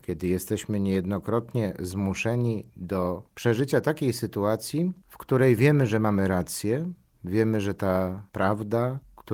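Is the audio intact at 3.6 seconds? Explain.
Yes, at 3.6 seconds the speech is intact, with no dropout, click, distortion or other fault.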